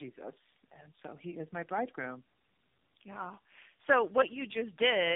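The speech sounds rough, muffled and warbly throughout, with nothing above 3.7 kHz. This is tandem speech coding: the signal passed through three speech codecs in turn, consistent with G.729A, CVSD and finally AMR-NB, each re-encoding the previous one's degraded output.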